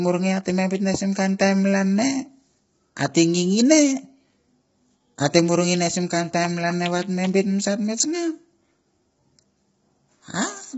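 From start to finish the speech sounds rough and grainy, with a hiss-like fizz filling the gaps between the voice's harmonics and nothing at all above about 7.7 kHz. This is likely low-delay AAC compression at heavy damage, the kind that fits a bitrate around 16 kbps. Its short frames, about 500 frequency lines each, set it apart from ordinary AAC, whose longer frames trade delay for finer frequency detail.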